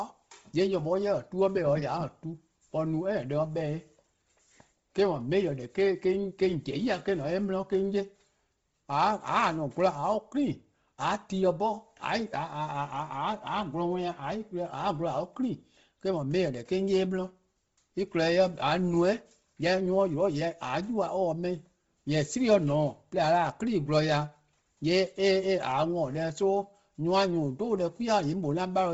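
A speech recording with Bluetooth LC3 compression damage throughout: nothing reaches above 7.7 kHz, and the upper band carries a breathy, grainy hiss instead of real detail, the likely result of the codec zeroing high-frequency content and filling the gap with noise. The heavy damage fits a low rate around 24 kbps with short 7.5 ms frames. A plain low-pass filter would leave the top band dull, not granular and noisy.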